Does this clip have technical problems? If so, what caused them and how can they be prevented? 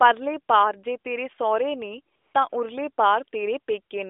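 Yes. AMR comfort noise appears at 2.16–2.34 s and again at 2.50–2.52 s. The phone judged the talker silent and stopped sending speech frames, so the receiver filled these gaps with smooth synthetic noise that switches in and out over the narrowband line. To prevent it, disable discontinuous transmission or make voice activity detection less aggressive so quiet passages keep being sent as speech.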